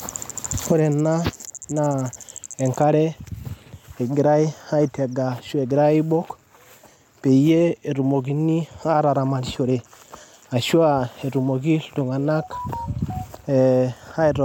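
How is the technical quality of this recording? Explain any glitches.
No technical faults or glitches can be heard in this recording.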